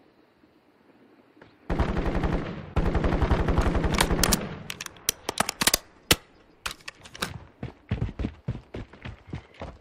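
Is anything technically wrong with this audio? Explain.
No, nothing in this audio points to a technical problem. The sound holds steady throughout, with nothing out of place to report.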